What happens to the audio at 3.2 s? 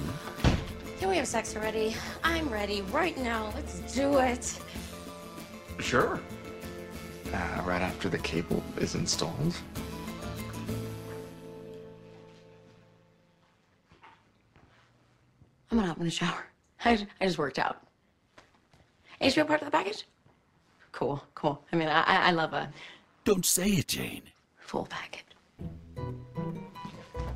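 Frames were overlap-added with windows not summing to constant gain, causing overlap-add ripple throughout: level swings about 6 dB around 150 times a second, a metallic buzz with extra tones around each note.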